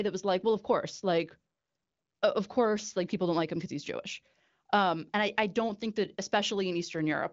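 No technical faults occur anywhere in this speech clip.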